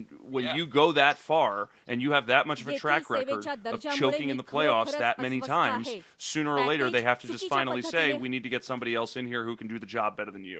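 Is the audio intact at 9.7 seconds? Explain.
Yes, at 9.7 s the speech is intact, with no dropout, click or distortion at that moment.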